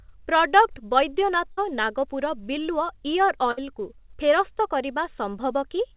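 Speech heard through a narrowband call line, with nothing above 4 kHz, shows two bursts of packet loss, at 1.52 to 1.59 s and 3.51 to 3.59 s. Each time the receiver stretches the last sound for about 55 ms, fading it into a held buzz or hiss, then jumps ahead past about 60 ms of lost audio. Unlike a plain dropout, the gap is filled rather than silent.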